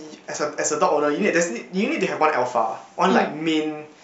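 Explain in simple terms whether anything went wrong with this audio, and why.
Nothing went wrong that can be heard: listening to the speech, no problem stood out at any point.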